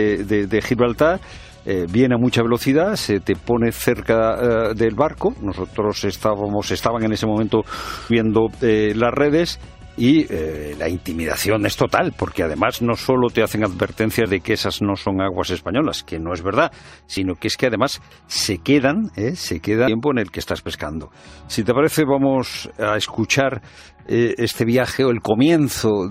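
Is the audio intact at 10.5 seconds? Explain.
Yes, the audio is intact at 10.5 seconds, with no dropout, click, distortion or other fault audible at that point.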